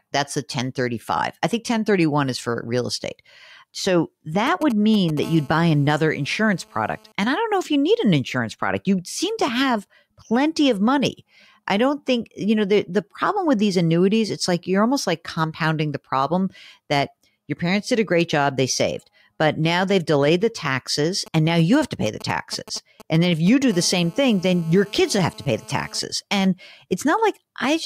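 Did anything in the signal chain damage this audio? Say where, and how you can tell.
Yes. GSM signalling bursts got into the analogue wiring. From 4.47 to 5.19 s, and from 21.26 to 23.72 s just after "they've delayed the taxes", a galloping dit-dit-dit of short 217 Hz buzzes sits roughly 15 dB below the speech. A nearby 2G phone was sending grouped radio bursts. The audio circuit rectified them.

GSM phone buzz follows each of these episodes, at the same analogue stage. From 5.23 to 7.12 s, and from 23.73 to 26.00 s, a steady, raspy 217 Hz buzz with many harmonics runs about 26 and about 25 dB below the speech. It has nothing to do with the speech. The phone is now in a call, transmitting in bursts 217 times a second. The rectified pulses form this tone.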